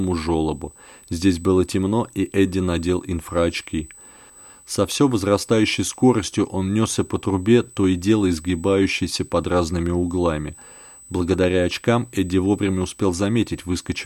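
From start to finish there's a thin, steady USB whine sitting at 8 kHz under the speech, roughly 25 dB down from the talker. That pitch is the giveaway: 8 kHz matches the 125-microsecond microframe rate of a USB bus, so the current pulses from the bus are getting into the audio through power or ground. It comes across as a fixed, needle-like high tone that never moves with the speech.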